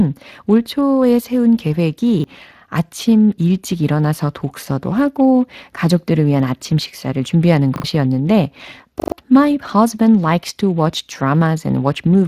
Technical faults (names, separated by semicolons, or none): Speex codec; repeated buffer